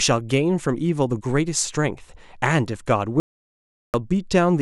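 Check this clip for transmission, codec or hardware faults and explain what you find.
One fault stands out: an audio dropout to silence from 3.2 s to 3.94 s. The speech cuts off mid-flow and returns about 0.74 s later, with no room tone in the gap, so the input was likely lost while the recorder kept writing silence. The waveform shows a flat line, and the spectrogram a blank vertical band.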